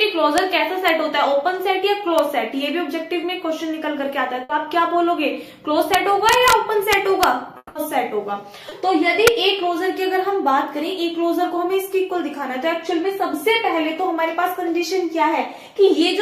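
The audio has four kinds of technical fault. First, integer overflow: loud peaks exceeded the largest integer value and wrapped to the opposite sign instead of being limited. This produces sharp, violent cracks at 0.38, 0.88, 2.19 and 9.27 s, and denser crackling from 5.94 to 6.53 s and 6.93 to 7.24 s, where the signal ran about 2 dB over the limit. Second, a burst of packet loss at 4.43 to 4.51 s: consecutive packets failed to arrive in time, so the receiver extended the last sound for about 60 ms while fading it. The audio then resumes with about 60 ms skipped. Third, what is likely a long network dropout at 7.57 to 7.77 s: the stream stopped, the last sound was stretched into a fading buzz or hiss that ended in about 40 ms of silence, about 180 ms in all, and about 180 ms of the original audio never returns. Finally, short concealed packet loss at 8.69 to 8.73 s: about 20 ms was missing and synthesised from the preceding sound, leaving a brief smear or wobble.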